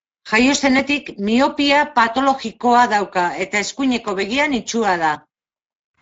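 The speech carries plainly audible Speex codec damage throughout, a noisy, hoarse coarseness consistent with a CELP coder running at a setting near 17 kbps. On a spectrogram, harmonics look blurred, and the band above 4 kHz shows only diffuse, shaped noise fill rather than real structure.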